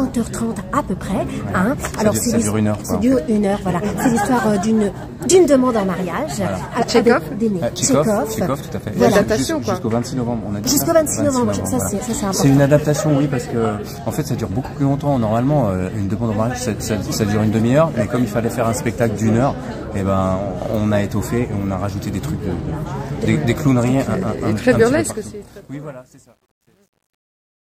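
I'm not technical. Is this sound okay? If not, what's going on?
No. The fade-out starting near 25.0 s has truncation distortion. Too few level steps remain, so from about 25.75 s the tail turns gritty.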